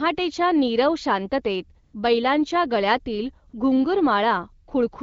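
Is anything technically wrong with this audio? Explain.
Yes. There are two brief AMR comfort noise gaps in this wideband phone speech. The first runs from 1.83 to 1.93 s, between "नीरव शांततेत" and "बैलांच्या गळ्यातील". The second runs from 3.49 to 3.53 s, right after "नीरव शांततेत बैलांच्या गळ्यातील". In each, the sending phone treated the moment as silence and stopped sending speech frames. The receiver then filled the gap with synthetic noise. The real background drops out briefly, and a smooth, even hiss takes its place.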